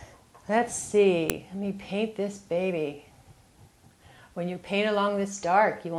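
A sharp, loud click snaps through the audio at 1.30 s. It is a file header played as audio. A second piece was joined on without its header being stripped. Those few dozen header bytes play as samples, giving one abrupt snap unrelated to the surrounding sound.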